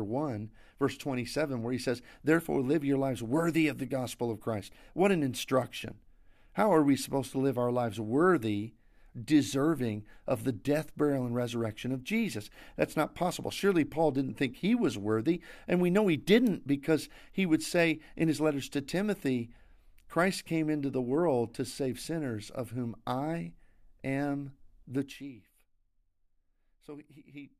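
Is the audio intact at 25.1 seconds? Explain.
No. From 24.96 to 25.33 s, just after "of whom I am", zipper noise: a roughly 15 dB drop in about 100 unsmoothed steps per second, each ticking audibly.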